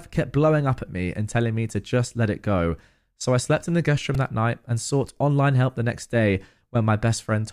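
A tiny click at 1.70 s and a slightly longer, buzzier tick at 4.15 s break into the speech. Both are repeated buffers: fresh audio arrived late, so the playback device replayed its last block of about 1.45 ms, which fits a 64-sample buffer. At 1.70 s that block sounds once more; at 4.15 s it loops four extra times, so its hard joins form a brief buzz and roughly 5 ms of speech goes missing.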